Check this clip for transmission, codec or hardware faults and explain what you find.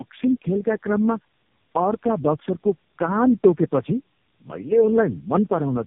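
There is one fault, present from start to finish: tandem speech coding. The call seems to have crossed four speech codecs in a row, fitting AMR-NB, CVSD, G.729A and AMR-NB, each re-coding the previous one's degraded output. The speech sounds rough, muffled and warbly, with nothing above 3.8 kHz.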